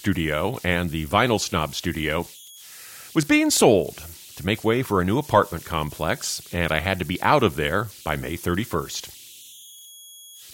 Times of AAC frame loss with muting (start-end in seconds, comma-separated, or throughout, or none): none